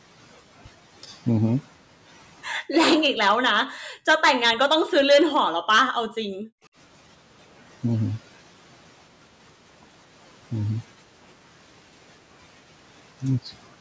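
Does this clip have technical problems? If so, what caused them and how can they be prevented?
Yes, there are two related problems, both from the echo canceller on the call.

Background gated by the echo canceller: the room sound drops out at 2.6 to 2.74 s, 3.79 to 4.18 s and 6.62 to 6.72 s, sinking by about 40 dB in the first two and about 30 dB in the last. The canceller heard loudspeaker playback and clamped the microphone hard, then let go once it stopped. A gentler suppressor setting, or comfort noise to fill the gaps, would keep the background steady.

Speech suppressed in double talk: the talker's speech dips or breaks up at 3.18 to 3.51 s, 4.85 to 5.24 s and 5.84 to 6.34 s, falling by roughly 40 dB for a few hundred milliseconds each time. The likely cause is both sides talking at once, so the canceller couldn't tell the near talker from the loudspeaker echo and turned everything down. 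Better double-talk detection, or a headset so there's no speaker echo to fight, would prevent it.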